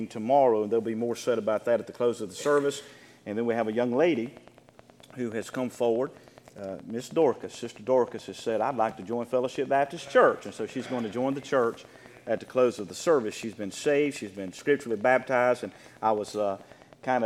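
From 3.51 s to 17.15 s, an even ticking runs over the sound and through its pauses: a train of clicks at 9.46 per second, around 150 in all, each roughly as loud as the audio. Nearby equipment or a faulty connection or power supply is likely injecting these near-identical pulses.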